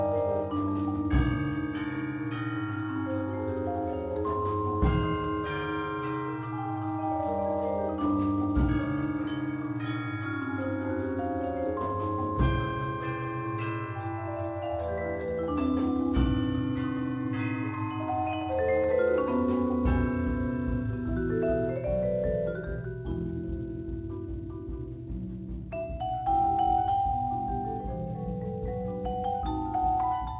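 No faults can be heard anywhere in this clip.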